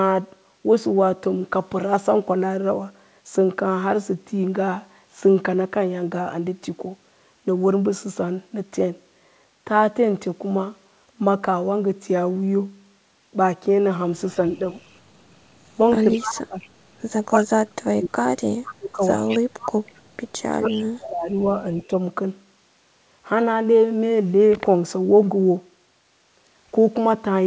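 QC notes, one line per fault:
14.35–14.41, 15.75–19.0 and 20.54–21.93 s, speech suppressed in double talk: the voice ducks while the other side is talking. The first is a tiny dip of about 5 dB. The second is heavy, dropping by about 40 dB and affecting around two seconds. The third goes about 30 dB down over roughly a second. This is likely the echo canceller failing to tell the near talker from loudspeaker echo and turning everything down.
14.77–14.81, 16.13–16.33 and 18.66–21.87 s, echo leak: a copy of the voice played on the loudspeaker side comes back 203 ms late. At 14.77 it's a faint scrap about 40 dB under the speech. At 16.13 it's much more obvious, only about 10 dB down. The long stretch from 18.66 sits about 15 dB down and overlaps the last suppression. The likely cause is a speakerphone on one end whose canceller isn't fully removing what its mic picks up, so the leftover gets sent back.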